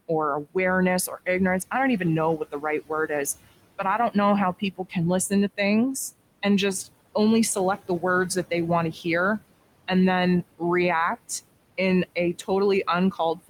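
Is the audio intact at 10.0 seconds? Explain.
No. At 10.0 seconds the speech carries noise suppressor artifacts, and they run through the whole clip. The suppressor treats the steady background as noise and lowers those frequency bands frame by frame, by about 21 dB. The room noise sits about 16 dB below the speech. So between words it sinks away, then comes back up under each word. That gives the background an audible pumping around the speech at this point.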